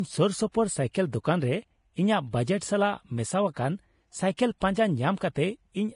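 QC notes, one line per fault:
throughout, Vorbis compression: likely heavy Vorbis coding at a low bitrate around 32 kbps strips everything above 10.6 kHz and coarsely quantises the treble, leaving the speech dull, hissy and grainy.
0.52–0.54 s, 2.58–2.61 s, 4.37 s, 5.18–5.21 s, pre-echo: quantisation noise spreads across each transform block ahead of a sharp onset, so a 19 to 32 ms hiss precedes these attacks and smears them.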